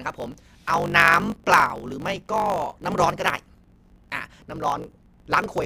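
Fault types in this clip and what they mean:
Block size mismatch (truncated): one stage in the chain hands over longer blocks than the next stage takes in, so the tail of every block is discarded. Each cut leaves a small discontinuity, and these repeat to form a steady 50 Hz buzz under the speech, which fits 1024-sample blocks being written. With part of every block gone, the speech runs about 1.16 times fast while staying close to its normal pitch.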